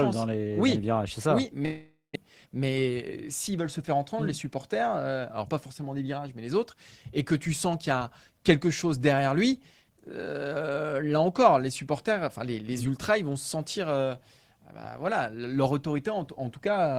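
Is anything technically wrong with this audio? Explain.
Yes, two faults sit close together early in the clip.

From 1.65 to 2.18 s there is a long network dropout, likely from packets failing to arrive. The last sound is stretched into a fading buzz for about half a second, ending in about 180 ms of silence, and 400 ms of speech is gone when audio resumes. A spectrogram shows smeared, decaying bands, then a blank strip.

From 2.25 to 3.08 s a jitter buffer speed-up follows as the receiver trims roughly 70 ms of excess delay by cutting short pitch-period pieces. Speech runs at 107% speed at unchanged pitch and sounds hurried. On a spectrogram the harmonics stay level but syllables are compressed in time.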